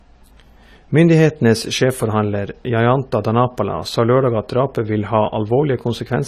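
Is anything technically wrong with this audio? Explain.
Yes. Throughout the speech there is plainly audible damage of the kind left by AAC compression, likely AAC-LC at a low bitrate, and the degree of damage fits roughly 32 kbps. To save bits, the encoder discards all content above 14 kHz and quantises the remaining spectrum coarsely, so the sound is dull and smeared, with a warbling, fizzy texture on sibilants and held vowels. A spectrogram shows a hard horizontal ceiling at 14 kHz, with patchy gaps and blocky smearing below it.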